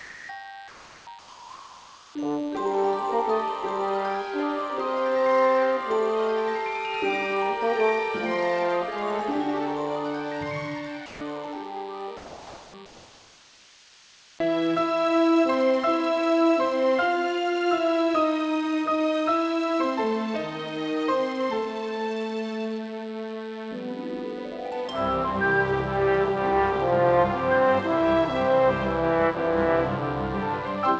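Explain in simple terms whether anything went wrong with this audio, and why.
A thin, steady buzz runs under the whole recording, a low 100 Hz hum with a rough, many-harmonic edge. This is DECT cordless phone buzz: a cordless phone or its base nearby sends a radio pulse every 10 ms, and the audio circuitry picks it up.

At 0.0 to 0.29 s, 0.68 to 1.07 s, 1.19 to 2.15 s and 12.86 to 14.39 s, the natural room background turns into a smooth, featureless hiss. The likely cause is comfort noise in place of the background: the sender stopped transmitting during quiet moments, and the receiver filled the gap with artificial noise.

Twice, actual sound disappears and is replaced by that same flat noise, from 11.06 to 11.21 s and around 12.17 to 12.74 s. This is sound dropped by the voice detector. The detector likely mistook quiet sound for background and briefly cut the transmission until it triggered again.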